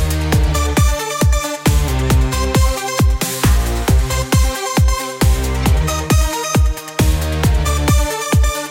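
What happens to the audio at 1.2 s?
At 1.21 s a single integer overflow occurs: a peak pushed about 1 dB past the integer limit wraps to the opposite sign instead of being held there. It sounds like a violent crack, far sharper than clipping, which would flatten the peak rather than flip it.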